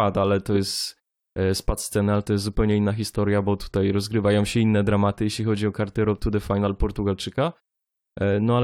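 Speech recording with no audible technical faults.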